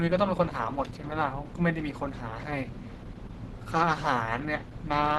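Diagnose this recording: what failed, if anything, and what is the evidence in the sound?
The codec stage is at fault, throughout the speech. Nothing is present above about 12.1 kHz, and the voice sounds muffled and hoarse. This likely comes from Opus compression in its hybrid speech mode, which fits a low bitrate around 16 kbps.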